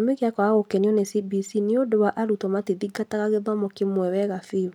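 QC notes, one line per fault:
Nothing to flag here; the speech comes across with no technical problems to note.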